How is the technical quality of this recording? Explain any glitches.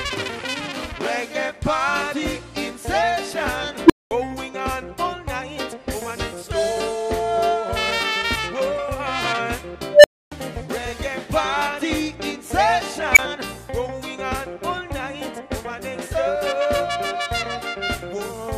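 The recording has three glitches of the same kind.

At 3.86 s, 9.91 s and 13.13 s a tone of roughly 300 Hz, 500 Hz and 2 kHz swells over 34, 127 and 40 ms, then drops to silence for 213, 277 and 21 ms. This is an unstable filter: bad recursive coefficients let its output grow, clip, overflow and cut out until reset.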